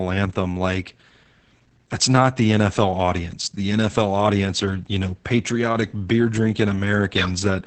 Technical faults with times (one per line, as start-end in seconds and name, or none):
0.00-7.67 Opus voice compression